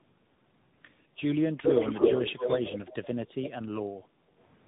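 Tandem speech coding runs through the whole clip. The speech sounds rough, muffled and warbly, with nothing above 3.8 kHz. That fits two speech codecs in a row, such as AMR-NB then G.726.

From 1.61 to 3.04 s, an echo leak adds a copy of the speech 222 ms late, a little louder than the original. An echo canceller likely let it through.

From 4.05 to 4.37 s, the background is gated by the echo canceller. The room sound dips by about 7 dB for about a third of a second, then returns.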